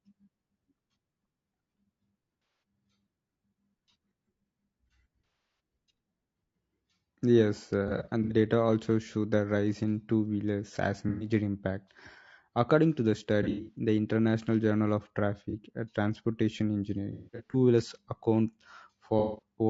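Low-delay AAC compression runs through the whole clip. The speech sounds rough and grainy, with noise between the harmonics and a thin, synthetic top band. This is likely from AAC-ELD's short frames at a rate that fits about 32 kbps.

AAC frame loss with concealment hits at 2.42, 5.26, 7.88, 11.09, 13.43, 15.50, 17.12 and 19.19 s. The gaps range from a 30 ms blip to 270 ms scattered over up to 0.42 s. The decoder rebuilds the missing audio from the last good spectrum, leaving smeared, noisy or phasey patches.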